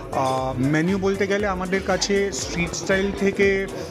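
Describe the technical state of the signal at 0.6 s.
At 0.6 s the audio is intact, with no technical fault audible at that point.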